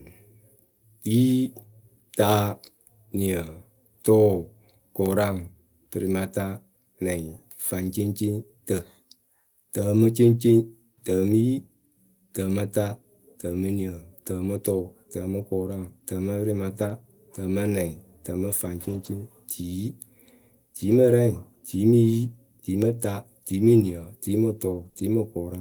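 Lost packets rebuilt from error correction occur in this speech clip at 8.25–8.27 s, 9.97–9.99 s, 16.81–16.91 s, 18.81–19.07 s, 24.73–24.87 s and 24.97–24.99 s. Packets went missing, but each following packet carried a low-bitrate backup copy that the decoder played instead. There is no gap, but those stretches sound rougher and noisier. The longer ones, at about 60 ms, 140 ms and 80 ms, fit runs of three, seven and four consecutive 20 ms packets. Short concealed packet loss follows at 24.89–24.93 s and 24.93–24.97 s, two back-to-back 20 ms holes with no backup copy available. The receiver extended the preceding sound to cover them before blending back into real audio, giving a brief smeared wobble.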